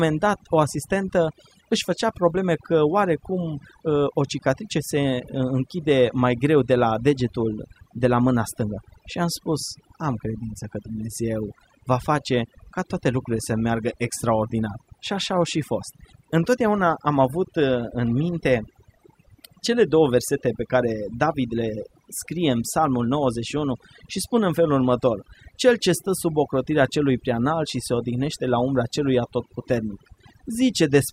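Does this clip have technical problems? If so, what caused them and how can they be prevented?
Yes. Overdone noise removal runs throughout the speech: an over-aggressive denoiser kills bands near its noise estimate, leaving twinkly near-silence and taking quiet parts of the voice with them. Back the reduction amount off and check by ear.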